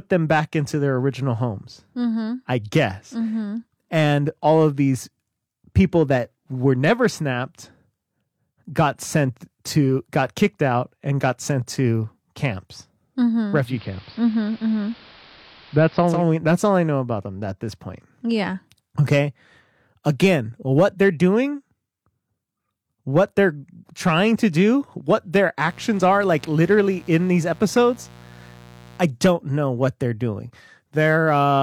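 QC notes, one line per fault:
13.56–16.28 s, digital radio blending to analogue: the receiver lost the digital stream and cross-faded over about 258 ms to the AM broadcast of the same station, holding it until 16.28 s before blending back. Hiss rises to roughly 25 dB below the signal, and the level shifts by about 1 dB at the change.
25.63–29.02 s, mains buzz: a steady, raspy buzz sits roughly 25 dB below the speech. It comes from sharp switching spikes, such as those from a dimmer, a rectifier or a missing shield, leaking into the chain twice in each 60 Hz mains cycle. Because the spikes are so abrupt, they spread harmonics of 60 Hz up into the kilohertz range, which gives the buzz its harsh edge instead of a smooth hum.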